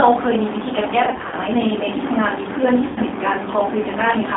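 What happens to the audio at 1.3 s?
At 1.3 s the speech is inside a stretch of VoIP packet loss concealed by the speech codec, running from about 1.06 s to 1.35 s. Across about 0.26 s of it roughly 150 ms of audio goes missing in scattered gaps, the longest about 50 ms. For each gap the decoder repeats its last pitch and vocal-tract filter at falling gain, so the speech turns into a stretched buzzy tone or coloured noise that sags in level, then sounds weak and rough as it recovers.

Underneath, the whole clip carries plainly audible G.729 codec damage, consistent with an 8 kbit/s stream, likely G.729A. The band is held to about 250 Hz to 3.6 kHz, so the speech sounds thin and telephone-like. Because the codec rebuilds each 10 ms frame from a pitch predictor, a spectral filter and a few pulses rather than the actual waveform, the speech has a slightly rough, synthetic grain.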